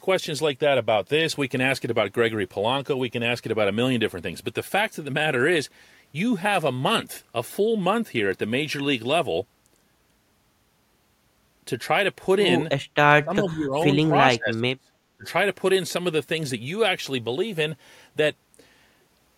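Speech, with the talker's level pulled down between 13.08 and 14.91 s by as much as about 35 dB, and again from 15.17 to 15.25 s by about 25 dB. The fault is speech suppressed in double talk, likely an echo canceller treating near-end speech as loudspeaker echo and attenuating both.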